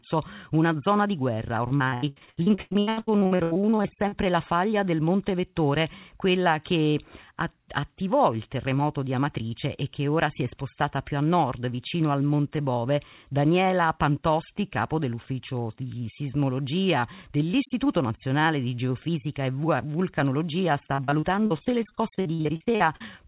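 From 1.68 to 4.14 s, repeated packet loss makes the speech choppy and robotic. Gaps up to 91 ms are filled by repeating prior sound, nearly half the span, which shows as stuttering, smeared blocks on a spectrogram. It recurs from 20.94 to 23.02 s, with gaps up to 42 ms.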